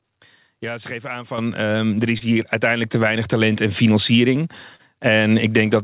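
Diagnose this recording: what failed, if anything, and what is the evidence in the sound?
Microphone volume stepped up at 1.38 s, between "ze geven aan" and "ehm er": the call processing raised the input gain by about 8 dB in one step, lifting voice and background together.

Short concealed packet loss at 2.18–2.24 s, after "ehm er", and 4.76–4.82 s, after "en financiering": about 30 ms never arrived over the network, and the receiver filled each gap, leaving brief smears. The band-limited sound, with nothing above 4 kHz, points to G.711 A-law.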